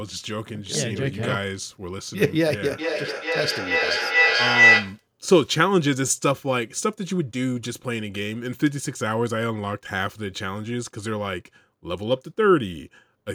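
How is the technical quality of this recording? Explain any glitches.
A piercing tone near 2 kHz swells over the speech from 2.78 to 5.06 s, pulsing roughly every 400 ms and peaking about 8 dB above it. This is feedback howl: sound looping from a loudspeaker back into a microphone in the same room gains level on each trip.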